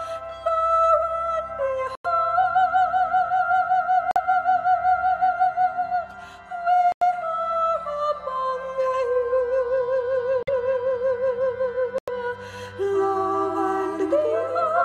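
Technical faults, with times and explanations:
1.95–2.06 s, 4.11–4.17 s, 6.92–7.02 s, 10.43–10.49 s and 11.98–12.10 s: corrupt frame muted. Each gap is a hard cut to silence lasting about 110 or 60 ms, which fits roughly four or two damaged codec frames that the decoder rejected and the player replaced with silence. Timing around each gap stays intact. On a spectrogram these appear as clean full-band vertical blank columns, and on the waveform as flat silent stretches with abrupt edges.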